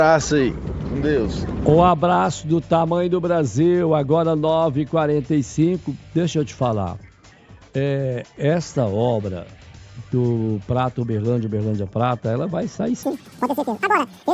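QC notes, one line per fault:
13.03–14.34 s, wrong sample rate: the final stretch suddenly races along at twice its proper speed and jumps a full octave, about 12 semitones, so the sound turns thin, chirpy and rushed until the end. Speed and pitch rise together because the samples are read out faster than they were captured, with no rate conversion. A clean 2:1 ratio fits 16 kHz material being played at 32 kHz.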